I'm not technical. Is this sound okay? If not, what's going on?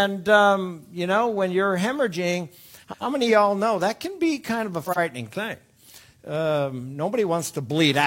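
No. There are two brief glitches, at 2.83 to 3.02 seconds and again at 4.84 to 4.98 seconds, where the sound turns into a jumbled flutter. This is frames out of order: the audio travels in small chunks, and two neighbouring pieces arrived swapped. In the first glitch each swapped piece is about 93 milliseconds long, and in the second about 46. Nothing is missing. It just plays in the wrong order.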